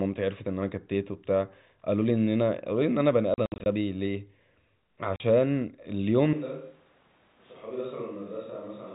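Between 3.34 and 3.66 s the stream suffers packet loss filled with silence. Packets went missing and the receiver put nothing in their place, so 160 ms of audio vanishes in scattered holes across that 320 ms span. The longest gap runs 60 ms, and the sizes fit 20 ms packets. Each hole drops abruptly to dead silence, with hard edges. A second, shorter loss at 5.16 to 5.20 s removes 40 ms of audio.

From 6.33 s to the end, the speech is likely being picked up by a distant microphone after the close one dropped out. The change is sudden. The sound becomes hollow and reverberant, thinner in the low end, and about 10 dB quieter, while room noise rises to roughly 25 dB below the speech. All of this sits within the narrow, telephone-band sound of the G.711 line, which cuts everything above 4 kHz.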